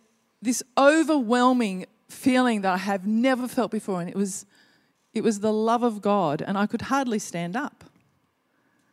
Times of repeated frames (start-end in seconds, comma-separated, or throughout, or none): 3.40-3.42